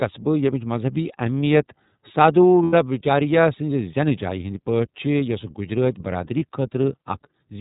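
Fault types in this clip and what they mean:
iLBC codec: Narrowband coding that handles each frame independently leaves the speech clear but plainly rough and synthetic. A spectrogram shows a hard ceiling at 4 kHz with nothing above, and the grain fits the 13.33 kbps mode with 30 ms frames.
Lost iLBC frames: At 2.64–2.74 s (90 ms) and 6.39–6.42 s (30 ms), missing packets are concealed by repeating the last pitch cycle with noise, heard as a held buzzy vowel. The waveform shows repeated periods, and the spectrogram shows flat harmonic stripes followed by immediate recovery.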